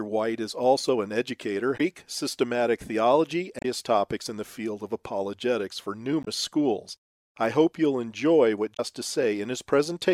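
Damaged data in a compressed stream breaks this speech recording four times. At each point the decoder hits corrupted frames, loses sync and has to hunt for the next valid frame header. That produces a brief chirp, squawk, click or short hole in place of the intended audio: at 1.74 to 1.81 s, at 3.59 to 3.65 s, at 6.23 to 6.28 s and at 8.73 to 8.80 s. Each lasts about 50 to 65 ms.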